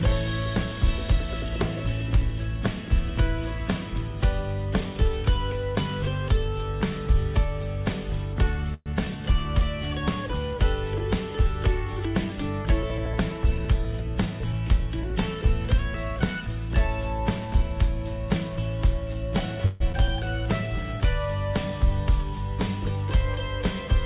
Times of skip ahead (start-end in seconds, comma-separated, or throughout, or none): 19.92-20.08